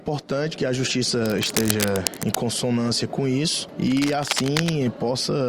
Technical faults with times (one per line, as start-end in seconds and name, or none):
1.15-2.40 cable scratch noise
3.87-4.69 cable scratch noise